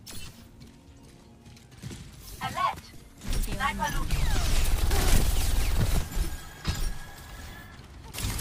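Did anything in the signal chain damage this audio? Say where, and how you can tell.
No, nothing in the signal chain damaged this audio. No stage, from the wiring and converter through to storage and playback, leaves any audible trace of trouble.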